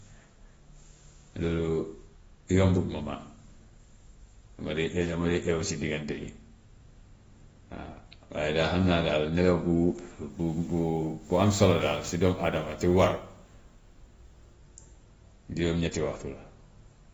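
Speech, likely passed through AAC compression at a low bitrate, around 24 kbps, so nothing survives above 7.6 kHz and the voice sounds dull and smeared with a fizzy, warbling edge. From 10.30 to 14.54 s, sample clock jitter of a few microseconds times samples unevenly, adding a rough hiss about 35 dB below the speech that swells on louder, brighter sounds.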